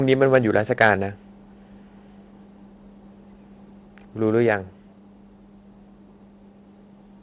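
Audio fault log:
0.34–0.37 s and 0.81–0.90 s, microphone overload: the loudest peaks turn harsh and crackly as their tops flatten, mildly at first (about 1 dB over) and more audibly at the second (about 5 dB), likely from input gain set too high. Unlike codec roughness, it appears only on peaks.
1.02 s and 4.47 s, microphone volume stepped down: everything, background included, drops by about 2 dB in one instant step, likely software automatically lowering input gain after the overloaded peaks. A fade would be gradual; this is an abrupt, level step with no added distortion.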